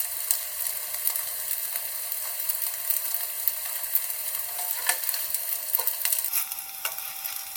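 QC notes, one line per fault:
6.29–7.56 s, section at the wrong speed: from 6.29 s to the end, the sound suddenly turns hurried and brighter. Everything runs 1.28 times too fast, and pitch rises with it by about four semitones, so tones climb and events crowd closer together. Because speed and pitch shift together at one instant, this final stretch was likely played against the wrong clock during editing or playback rather than altered by a pitch effect.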